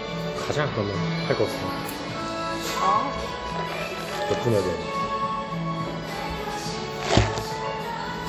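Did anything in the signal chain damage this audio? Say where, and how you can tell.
Yes: throughout, ringing, washy sound with breathing hiss and nothing above 19.9 kHz. Codec stage: likely WMA compression, its long transform blocks smearing quantisation noise, fitting about 48 kbps.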